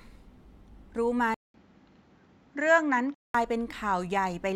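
At 1.34 s the speech cuts out for 200 ms, then returns dull, with nothing above 7.6 kHz and a faint new hiss at much the same level, until 3.35 s. The likely cause is the input switched to a poorer device. A spectrogram shows a flat ceiling; the waveform shows a gap.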